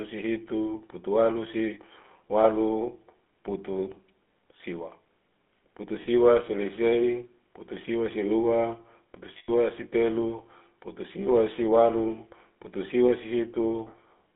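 From the first moment the speech carries the rough, buzzy grain of the GSM full-rate codec, which fits a 13 kbps full-rate coder. It rebuilds the voice from a vocal-tract model excited by coarse, regularly spaced pulses, so vowels sound gravelly rather than smeared or watery. The band sits between 250 Hz and 3.4 kHz. That pulse-driven rasp, not the swirling artefacts of newer codecs, is what marks it.

Lost GSM frames interrupt three times. At 1.74 s, right after "si hitu putu walu", about 46 ms is held as a brief metallic ring. At 6.02 s, just before "si lesei putu siwa", about 50 ms sounds the same. At 9.38 s, between "siwa si lua putu" and "si telu putu siwa", a longer 124 ms stretch rings. Each fits two or five missing frames replaced by the last good frame repeated. The sound doesn't drop to silence, and it isn't a click. The last sound is frozen into a ringing buzz.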